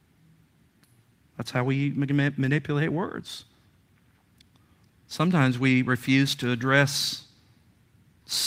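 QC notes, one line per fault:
No technical faults are audible.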